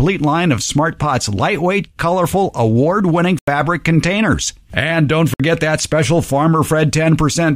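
At 3.39 s the speech cuts to silence for about 87 ms, then again at 5.34 s for about 58 ms, each gap picking up later as if it had played on. That's likely a Bluetooth dropout, with packets missing the headphones in time.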